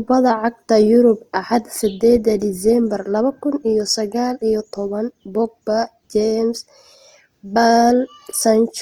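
Speech that sounds grainy and rough throughout, its tones turned noisy. That's likely Opus compression at a low rate, something around 24 kbps.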